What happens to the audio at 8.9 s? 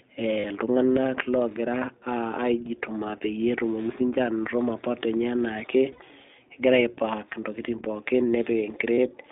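At 8.95 s the speech briefly turns into a held, slightly buzzy, breathy vowel. It lasts about 40 ms, to 8.99 s, and then the voice snaps back almost at once. These are lost iLBC frames. When the packets went missing, the decoder filled the gap by repeating the last pitch cycle with noise mixed in. The 40 ms gap fits two lost 20 ms frames. Recovery is immediate because each iLBC frame is decoded on its own, without depending on the frame before it.

Around that moment, and throughout the clip, the speech sounds boxed-in, clear but somewhat rough and synthetic. That comes from the iLBC codec itself, and the codec damage is plainly audible. The sound is confined to a line band of roughly 250 Hz to 3.7 kHz, with nothing above 4 kHz. The 20 ms frame size points to iLBC's 15.2 kbps mode. It codes each frame's excitation independently, which leaves a rough, synthetic texture on the voice.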